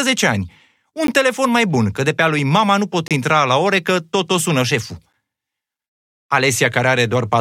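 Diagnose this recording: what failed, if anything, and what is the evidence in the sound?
Three short dropouts to dead silence, each with abrupt edges: at 1.07 s, between "ani un" and "telefon mai bun că"; from 3.08 to 3.11 s, after "lui mama nu pot"; and at 5.13 s, after "tot o sună șeful". They recur every 2 s, matching a 2.0 s segment length. This is a gap between stream segments at the network/playback stage. Segment time stamps leave holes of about 12, 28 and 8 ms that the player pads with silence, so no audio is lost.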